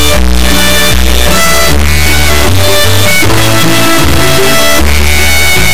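An extremely loud, harsh buzzing like a square wave runs through the whole clip, dropping to silence wherever the sound gets very quiet. This is integer read as float: 32-bit integer samples were interpreted as 32-bit floating-point values, landing near zero or far past full scale.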